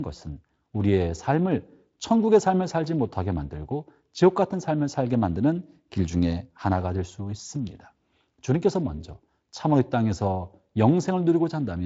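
Nothing goes wrong anywhere in this speech; it has come through the Speex codec, which you mostly notice as the top end stopping at around 7.7 kHz, and any trace the codec leaves on the sound is faint at most.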